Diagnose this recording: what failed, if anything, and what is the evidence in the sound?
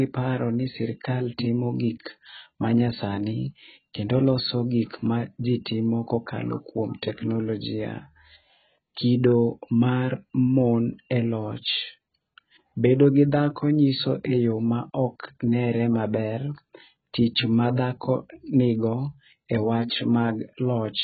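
Codec stage, throughout: nothing above 4.6 kHz, and smeared, warbling sibilants that a plain low-pass filter wouldn't cause. This is likely AAC compression, fitting AAC-LC near 12 kbps.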